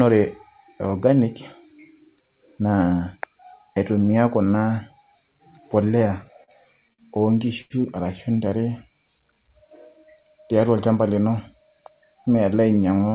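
From 6.08 to 6.51 s the speech stutters through repeated stalls: four jitter-buffer underruns, the longest 42 ms, are bridged by repeating the last sound, so the waveform shows brief copied cycles and faded dips. At 6.93–7.01 s and again at 7.61–7.73 s, a short stall from a late packet holds a sound for 53 ms and then 87 ms. On the spectrogram these appear as smeared, flat-lined harmonic bands before normal detail resumes. From 10.61 to 11.11 s a jitter buffer speed-up trims about 50 ms of pitch periods, so the speech runs at 109% with unchanged pitch. The waveform shows slightly compressed syllable spacing. Throughout, the spectrogram is empty above 4 kHz, which fits a narrowband G.711-type call codec.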